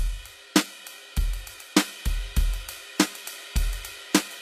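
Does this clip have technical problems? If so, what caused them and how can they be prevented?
Yes. Throughout, the music's treble sounds gritty and metallic, and nothing reaches above 14.9 kHz. This is likely HE-AAC compression, which rebuilds the top octaves from copied lower bands. The damage fits a bitrate near 24 kbps. Encoding at a higher bitrate prevents it.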